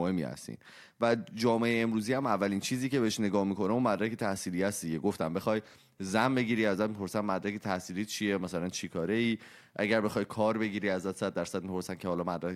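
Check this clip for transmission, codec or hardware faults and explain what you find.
Nothing in the speech recording points to a problem in transmission, encoding or the playback hardware.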